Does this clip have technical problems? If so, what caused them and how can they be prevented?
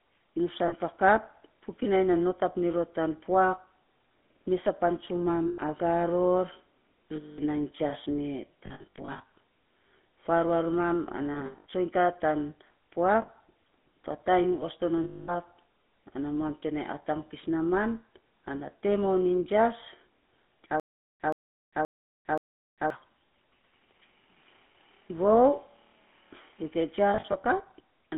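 Yes. Throughout, the GSM full-rate codec gives the sound a buzzy, gravelly roughness, consistent with 13 kbps full-rate GSM over a 200 Hz to 3.5 kHz line. The spectrogram shows an empty band below 200 Hz and nothing above 3.5 kHz. Using a wideband codec such as AMR-WB or Opus prevents this.

Lost GSM frames occur at 0.68–0.73 s, 5.48–5.59 s, 7.16–7.39 s, 13.22–13.29 s and 15.04–15.34 s. Scattered losses of up to about 70 ms each also fall across 8.66–9.30 s, 11.34–11.66 s and 27.10–27.36 s. Each gap is filled by repeating the last good frame, which is heard as a metallic ring. On a spectrogram these show as smeared, frozen harmonics. Better radio coverage or stronger channel coding prevents this.

A stutter with silent gaps runs from 20.80 to 22.90 s. The same 125 ms burst plays four times, each followed by about 401 ms of digital silence, giving a 526 ms cycle. The waveform shows identical blocks separated by flat silent lines. 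The likely cause is a stalled player replaying its last buffer on each retry. Larger playback buffering and proper underrun handling prevent this.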